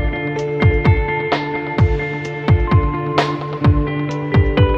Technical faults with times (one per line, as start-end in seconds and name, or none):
none